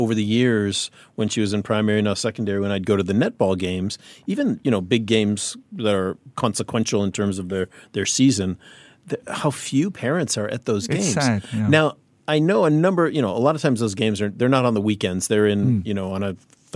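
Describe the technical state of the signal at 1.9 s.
At 1.9 s the speech signal is intact, with no dropout, clipping, distortion or other fault.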